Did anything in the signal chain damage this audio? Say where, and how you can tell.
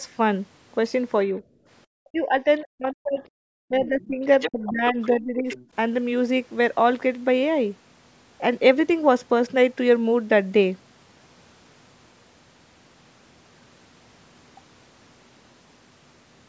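Yes, in the call processing, specifically the echo canceller. Speech suppressed in double talk shows up from 2.00 to 3.22 s, 3.62 to 4.23 s and 4.48 to 5.57 s. The speech dips or chops out, by around 40 dB at worst and nearer 25 dB in the last stretch. That likely means the canceller couldn't tell the talker from loudspeaker echo and ducked everything.

Same stage, other direction: the other side's voice leaking through at 3.87 to 4.07 s, 4.40 to 4.70 s, 5.02 to 5.07 s and 5.48 to 5.66 s. It's a faint second voice in scraps, mostly well under the talker but close to it at about 4.4 to 4.7 s. That's likely leftover echo the canceller didn't remove.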